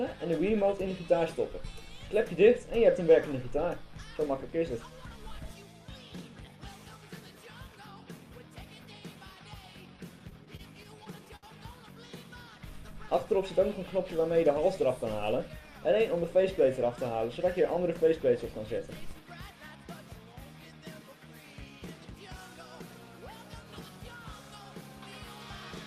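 Between 10.19 and 11.45 s the audio drags and stutters, hitching nine times as it briefly holds onto the last sound before moving on. These are repeated stalls (stutter): packets arrived late or too slowly, so the jitter buffer kept running dry and the receiver stretched what it had until more arrived. In total 163 ms was filled this way, about 13% of that stretch, the longest hold lasting 67 ms, with nothing actually lost.

From 12.45 to 13.07 s the audio runs at about 95% speed while keeping its pitch, so sounds come out drawn out. This is a jitter buffer slow-down: the buffer was short of its reserve, or had just raised its target delay, so the receiver repeated single pitch periods or fragments of pauses over and over, adding 37 ms to rebuild the cushion.

At 15.22 to 15.68 s the opposite happens: the audio rushes at about 108% speed, still at the same pitch, and sounds hurried. This jitter buffer speed-up came from the buffer holding more than its target, as when delayed packets land together. 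To trim that excess delay the receiver cut out short pieces of one or a few pitch periods in quick succession, removing roughly 50 ms.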